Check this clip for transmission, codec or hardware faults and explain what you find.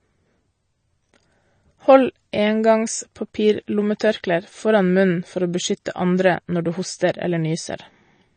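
There is one fault, and it runs through the whole clip: codec damage, most likely from MP3 compression. The speech has nothing above 9 kHz, so sibilants and breaths sound dull and clipped at the top. The damage is plainly audible. The likely cause is an encoder short of bits. It cuts the treble at a fixed point and lets weak frequency lines drop in and out between frames. That gives a watery, swirling texture. The strength of the effect fits a low bitrate of around 32 kbps.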